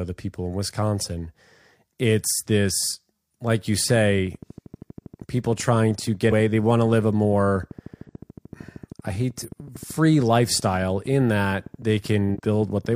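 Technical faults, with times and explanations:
3.96 to 12.94 s, train of clicks: sharp, identical ticks at a steady 12.9 per second, about 150 in all, roughly as loud as the sound itself and audible in pauses too. This is likely interference or a faulty connection or power supply, and it differs from dropouts because nothing is lost.
6.27, 8.04, 9.38 and 12.31 s, compressed frames skipped: the audio jumps ahead by two or three 46.4 ms frames, roughly 100 to 150 ms each time, because those frames were missing or rejected.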